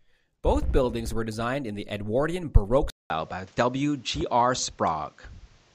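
At 2.9 s the speech drops out for 200 ms, then returns duller, with nothing above 8 kHz and a new noise floor roughly 35 dB down, at about the same level. This points to the input likely having switched to a poorer device, which holds through the end.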